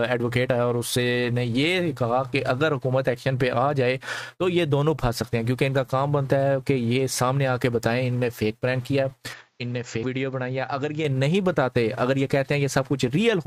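At 9.33 s the sound abruptly turns duller and a little quieter, losing everything above 7.6 kHz and gaining a faint new background hiss, then clears again at 11.05 s with no gap at either change. This is likely an input switched to a poorer device.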